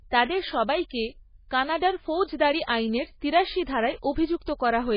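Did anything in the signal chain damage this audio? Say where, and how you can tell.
Yes. The codec stage is the likely culprit, with MP3 compression running through the whole speech clip. Nothing sounds above about 5.1 kHz. The speech has a watery, swirly quality. The damage is heavy, which fits a very low bitrate near 16 kbps. Starved of bits, the encoder cuts off the treble and drops weak frequency lines.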